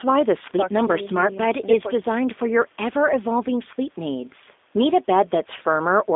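A speech recording that has passed through the G.729 codec for its whole length. The sound is confined to a narrow telephone band, roughly 250 Hz to 3.6 kHz, so it is thin and muffled. The codec damage is plainly audible. The speech is rebuilt from a vocal tract model and a few pulses per frame, not sent as a waveform. That gives it a rough, synthetic edge. The sound fits a low-rate VoIP link near 8 kbit/s. The call's microphone processing also trims the deepest bass, which is normal.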